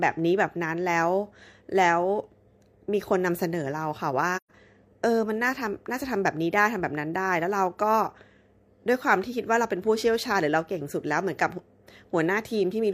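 AAC frame loss with muting cuts into this speech recording from 4.36 to 4.51 s, leaving a soft-edged gap in the sound. The decoder received nothing for that stretch and filled it with silence, zeroing the spectrum rather than guessing at the missing content. Because AAC frames overlap, the sound fades out and back in at the edges instead of stopping abruptly. The roughly 128 ms of lost audio points to about three consecutive missing frames.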